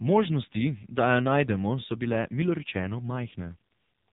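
Throughout, the speech sounds buzzy, synthetic and muffled, with nothing above 3.8 kHz: heavy AMR narrowband mobile codec damage, which fits a low bitrate near 5.9 kbps.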